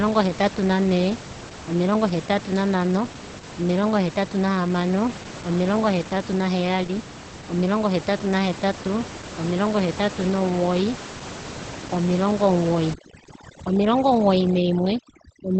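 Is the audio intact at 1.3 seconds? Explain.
No. Opus voice compression runs through the whole clip, including 1.3 seconds. The linear-prediction coder keeps only a wideband range, with nothing above about 8.6 kHz. It codes the excitation coarsely, which fits a bitrate near 12 kbps. The speech sounds muffled, hoarse and slightly robotic.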